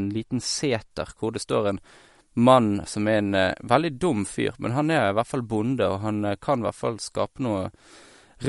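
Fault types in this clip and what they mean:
MP3 compression: throughout, nothing above 11.2 kHz and plainly audible watery smearing, likely from a lossy MP3 encode starved of bits, fitting roughly 50 kbps.
pre-emphasis left on: from 0.91 s to the end, treble lifted about 11 dB at 10 kHz versus 1 kHz, matching an uncorrected 50 µs FM boost; thin, sibilant.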